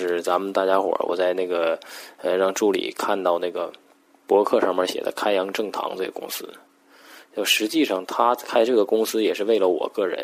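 No technical faults are audible.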